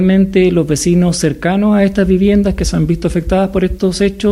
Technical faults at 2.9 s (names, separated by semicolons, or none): drift correction step